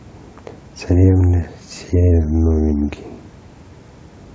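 From 2.11 to 2.97 s the speech suddenly slows by about 6% and drops 107 cents, a touch over a semitone, with speed and pitch moving together, then snaps back to normal at the end. That's a drift correction step, most likely clock-matching software nudging the playback rate down in one jump to refill its buffer. It comes across as a brief, sagging detune in the middle of the line.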